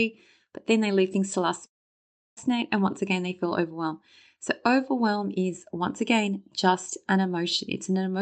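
From 1.65 to 2.39 s the speech breaks off for about 0.7 s, most likely a long network dropout. The last sound carries on briefly as a fading buzz, then sinks to near-silence for about 680 ms before speech resumes with that stretch simply gone. Unlike a short concealed packet loss, the gap is far too long to smooth over, and unlike a deliberate mute it starts with that decaying tail. The call path's audio band stops around 8 kHz.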